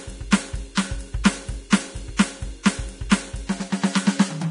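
The whole music clip carries heavy codec damage that sounds like Vorbis compression, likely squeezed hard enough to fit something around 32 kbps. Nothing comes through above about 10.6 kHz, so the top end feels closed in, and what treble remains is grainy and hissy because the fine detail has been swapped for noise of similar energy. Sustained tones come out roughened, and attacks lose their crispness.

Pre-echo shows up on four sharp attacks: from 0.75 to 0.77 s, at 1.24 s, from 1.70 to 1.72 s, and at 3.10 s. Each attack landed late in a transform block, so the quantisation noise meant for the loud hit spread back over the quiet moment just before it, for between 13 and 22 ms. You hear a brief smear of hiss leading into each hit, and the hits themselves land soft instead of snapping.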